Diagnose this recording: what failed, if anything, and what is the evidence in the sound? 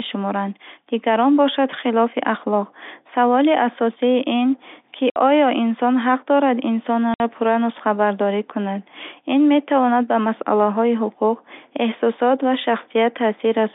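Network stage, packet loss filled with silence: 60 ms gaps at 5.10 s after "ин ки" and 7.14 s after "оё инсон ҳақ дорад", fitting two lost 30 ms packets each. They show as flat, silent waveform stretches and blank spectrogram columns, with hard edges.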